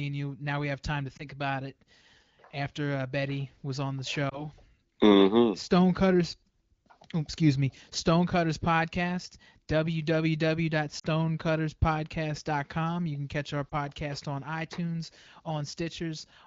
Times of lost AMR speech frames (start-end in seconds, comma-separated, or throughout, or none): 1.18-1.24, 4.29-4.46, 10.99-11.06, 13.69-13.75